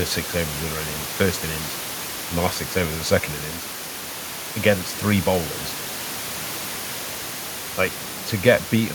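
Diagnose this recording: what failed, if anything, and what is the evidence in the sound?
Nothing failed in this recording; the only thing to hear besides the speech is the room's own background noise, sitting about 13 dB below it.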